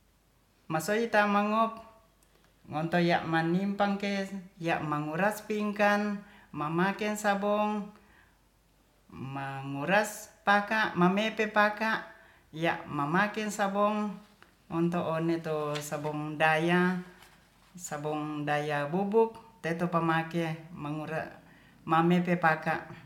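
No faults are audible anywhere in the recording, with nothing to report at any point.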